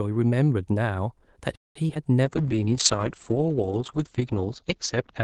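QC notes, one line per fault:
1.55–1.77 s, call audio freeze. The sound stops and stays almost silent for about 190 ms. The last sound is carried on only briefly before that gap. The likely cause is packets held up in transit, which left the jitter buffer empty. About 200 ms of filler was inserted and nothing was lost. When the packets arrive, the speech resumes where it stopped. The delay through the call is now 200 ms longer.
1.87–1.91 s and 1.95–1.97 s, short concealed packet loss. Two brief smears follow the restart closely. In the first, 20 ms of audio never reached the decoder and only 12 ms was patched. In the second, 40 ms went missing against 6 ms of patch, so the receiver dropped audio to claw back roughly 30 ms of delay. Each patch extends the previous sound and then blends back in. Each sounds like a quick smear or wobble.
2.24 s to the end, call bitrate drop. The encoder falls from 40 kbps to 8 kbps and stays at the floor for about 2.09 s. 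Audio bandwidth narrows from 12 kHz to 8 kHz, so the top end goes dull. Coarser coding adds a rough, watery texture. This is what happens when the call's bandwidth estimate collapses and the Opus encoder is starved of bits. The speech stays muffled and grainy to the clip's end.
2.30–2.56 s, jitter buffer slow-down. This section plays at about 86% speed with the pitch unchanged. The receiver repeated single pitch periods to stretch the audio by 44 ms. That rebuilds its reserve after the earlier delay changes. Sounds come out drawn out and slightly sluggish. It overlaps the start of the bitrate drop.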